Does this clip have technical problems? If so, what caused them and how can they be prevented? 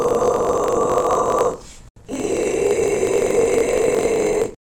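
Yes. A block size mismatch (truncated) runs through the whole clip. One stage hands over longer blocks than the next stage reads, so the tail of every block is dropped. Each cut leaves a small discontinuity, and these repeat as a buzz at about 46.9 Hz, which fits a 1024-sample read block. Because material is discarded, the sound plays about 1.12 times faster while keeping roughly its normal pitch. To prevent this, configure every stage in the chain to use the same block size, or buffer between them so no samples are discarded.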